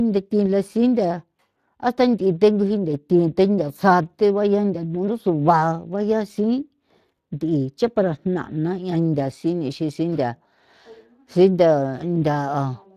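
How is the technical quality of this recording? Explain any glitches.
The technical quality is compromised throughout by Speex codec damage. Across the whole recording, the speech has a plainly audible hoarse, noisy graininess. This CELP coder rebuilds speech from a compact excitation, and the degree of damage fits a bitrate near 22 kbps. On a spectrogram, energy stops sharply at about 15.3 kHz.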